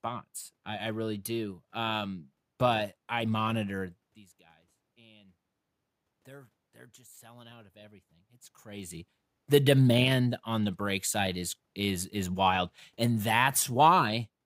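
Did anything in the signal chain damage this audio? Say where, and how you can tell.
Yes. Clock slip clicks run from 0.24 to 14.40 s, faint ticks about every 0.2 s. At the converter stage, two unsynchronised clocks likely drift roughly 100 ppm apart, dropping or repeating one sample each time.

Automatic gain rising, 4.95 to 9.89 s: call processing lifted gain about 5 dB after the input fell about 24 dB, so speech and room noise swell together.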